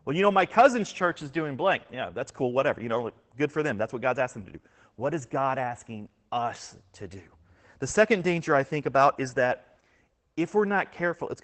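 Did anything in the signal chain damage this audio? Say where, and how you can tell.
Yes: Opus voice compression at the codec stage, throughout the speech. Nothing is left above about 8.7 kHz, so the band has been narrowed to wideband, and the plainly audible damage, a muffled, hoarse, faintly robotic quality, points to the SILK linear-prediction coder running at a low rate, which fits roughly 12 kbps. At that rate the excitation is coded coarsely, roughening the voice, while the top of the spectrum is simply dropped.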